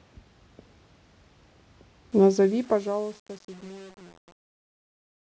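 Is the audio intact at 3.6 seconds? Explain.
No. At 3.6 s the speech is caught in truncation distortion on a fade, which runs from 2.12 s to the end at 5.28 s and is worst from 2.41 s onward. As the fade-out lowers the level, the quiet tail turns gritty. The fade stage keeps too few bits and adds no dither, consistent with about 8-bit resolution, so the low-level waveform collapses into a few coarse square steps.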